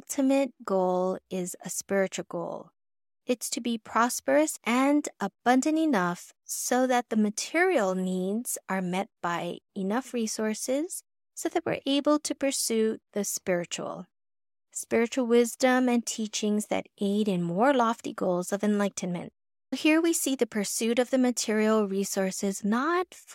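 Listening to the speech closely, nothing stood out as a technical fault at any point.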